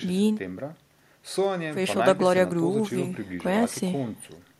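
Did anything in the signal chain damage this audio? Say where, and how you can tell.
No, nothing damaged this audio.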